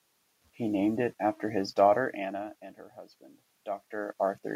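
No technical faults can be heard in the signal; the background noise of the room belongs to the recording, and the shifts in level at around two seconds and again around three and a half seconds come from the talker moving relative to the microphone.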